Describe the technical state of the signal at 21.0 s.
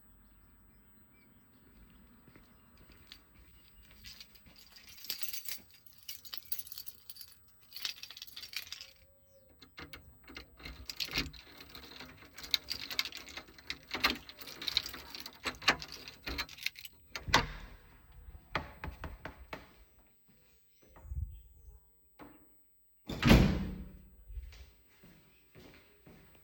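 At 21.0 s you're hearing the USB whine that runs through the whole clip: a steady, fixed-pitch tone at 8 kHz, strongest at its 16 kHz harmonic, sitting roughly 25 dB under the sounds. It comes from the USB bus drawing current in 125-microsecond microframes, and that regular pulsing leaks into the audio through the power or ground, so you get a thin, high, constant whine.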